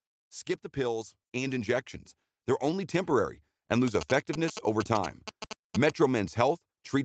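Automatic gain rising, from 0.73 to 1.94 s: the gain control judged the input too quiet and lifted its gain by about 4 dB over roughly a second, so the speech and the background noise behind it swell up together rather than the talker growing louder.

GSM signalling bursts, from 3.88 to 5.90 s, starting just after "only temporary and": a nearby 2G phone sending signalling bursts is being rectified by the audio circuitry, producing a galloping dit-dit-dit of short 217 Hz buzzes, loud and only a little below the speech.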